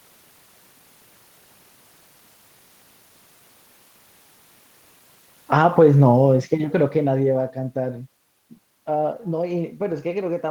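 From 5.38 to 7.61 s, automatic gain falling. The gain control found the input too loud, or its background noise too strong, and cut about 12 dB. Speech and room noise sink together.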